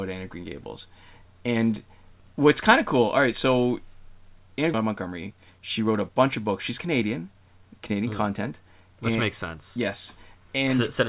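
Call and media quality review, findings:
Skip ahead at 4.74–4.76 s: playback jumps straight forward with no gap or fill, and about a second of audio is just gone. The two sides butt together. Probably the jitter buffer overflowed and tossed the backlog, cutting the delay by roughly that second.

Jitter buffer speed-up, 4.84–7.47 s: audio runs about 7% fast at unchanged pitch and feels a bit rushed. The buffer is still over target and keeps clipping out pitch-period slices, around a fifth of a second in total. This all sits on a narrowband G.711 A-law path, with nothing above 4 kHz.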